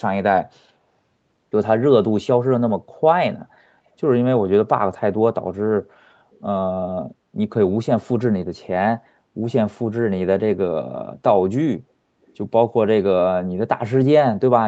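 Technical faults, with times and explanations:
6.31–6.41 s and 12.26–12.34 s, echo leak: two brief, very faint ghostly scraps of the speech come back, each around 0.34 s behind the original and sitting roughly 35 to 40 dB below it. That's likely the far end on a loudspeaker with its echo canceller letting a bit of its mic pickup slip through and sending it back down the Opus call path.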